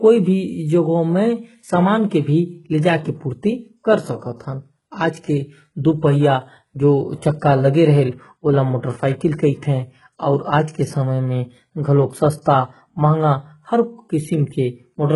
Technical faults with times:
0.00-15.15 HE-AAC compression

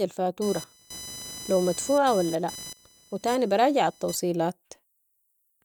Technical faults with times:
0.42-4.15 computer activity noise

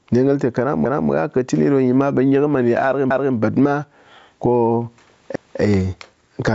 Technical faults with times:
0.00-6.55 gain pumping
0.85-1.10 overlapping chunks
3.10-3.35 overlapping chunks
5.35-5.60 overlapping chunks

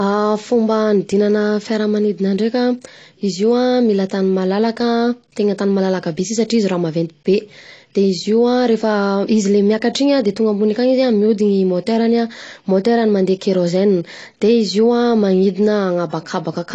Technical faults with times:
0.00-16.75 low-bitrate audio saved at a high bitrate

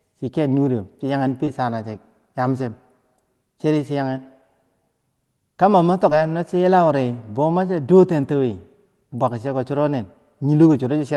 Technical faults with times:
1.45-1.49 short concealed packet loss
6.09-6.13 short concealed packet loss

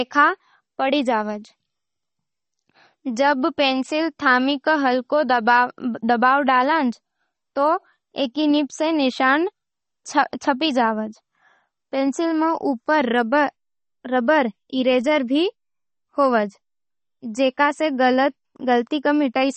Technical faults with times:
0.00-19.56 MP3 compression

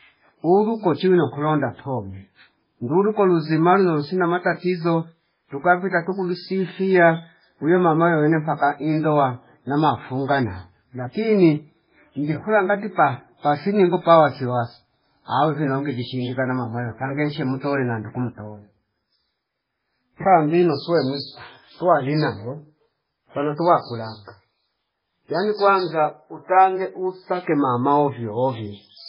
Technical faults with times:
0.00-29.08 MP3 compression

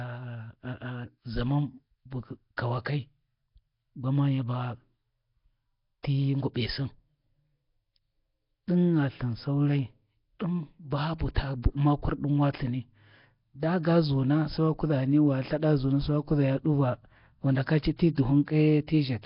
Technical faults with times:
0.00-19.26 Nellymoser compression
6.03 pre-echo
11.19-11.36 pre-echo

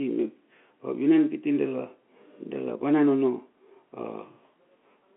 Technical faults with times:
none

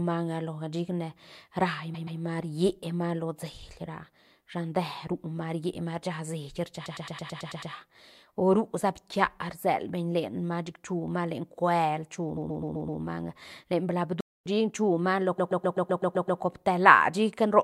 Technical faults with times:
1.94-2.19 repeated frames
6.85-7.72 repeated frames
12.36-13.00 repeated frames
14.20-14.46 playback stall
15.38-16.40 repeated frames

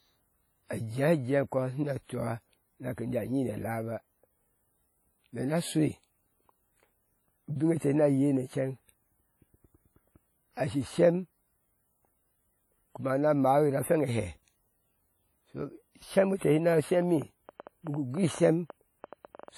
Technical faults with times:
0.00-19.57 WMA compression
16.69-19.49 train of clicks

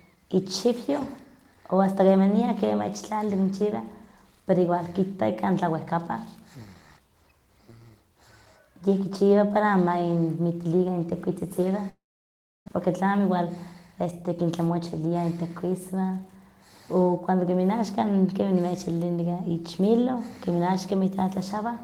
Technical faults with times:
11.89-12.70 long network dropout
12.88-15.15 jitter buffer speed-up

